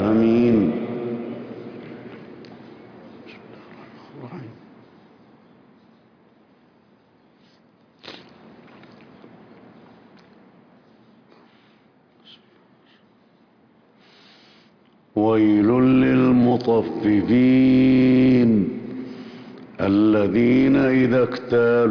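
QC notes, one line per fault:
No faults detected in this audio; nothing here calls for a QC flag.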